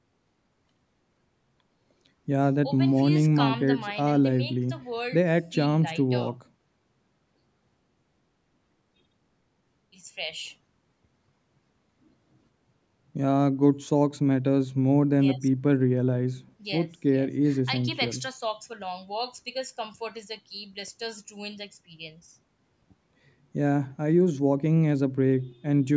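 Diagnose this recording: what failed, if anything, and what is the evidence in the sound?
Nothing in the recording has failed: the speech carries the normal signature of call microphone processing, with the lowest bass trimmed by its high-pass filter and no content above 8 kHz, which is the expected bandwidth of that call path.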